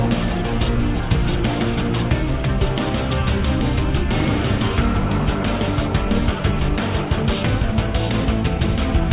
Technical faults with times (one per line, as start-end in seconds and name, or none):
none